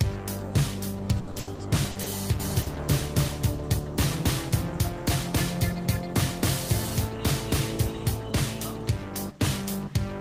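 From 1.19 to 2.09 s, repeated packet loss (robotic sound) sets in: packets went missing or arrived late six times in under a second, and each hole was bridged by extending the preceding sound. About a third of the stretch is filled in this way, roughly 310 ms, and about 200 ms is lost outright, with the longest gap 80 ms. The result is choppy audio with pieces dropped out.

From 2.40 to 8.30 s a doubled audio track appears. A second copy, likely from the same signal being captured again along a slower path, runs about three tenths of a second behind at roughly equal loudness. It is dry and full-band, with no decay, and it starts and stops abruptly.

At 2.62 to 2.69 s, a short stall from a late packet occurs. A packet missed its slot, the jitter buffer ran dry, and the last sound was held for 40 ms until the packet arrived. Nothing is lost, but one moment drags with a slight buzz or dip, shifting the timing by 40 ms.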